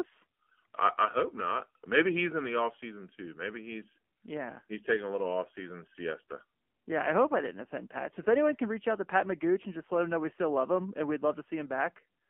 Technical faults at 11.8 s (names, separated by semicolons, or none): AMR narrowband mobile codec